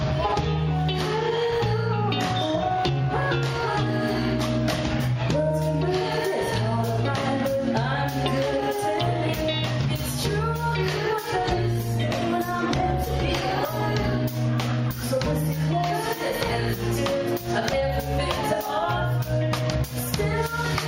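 From 11.46 s to 14.05 s there is a call bitrate drop. The connection's bandwidth estimate fell, so the encoder spent far fewer bits. The sound turns coarse and rough for about 2.5 s, which fits a fall from 96 to 19 kbps, before recovering.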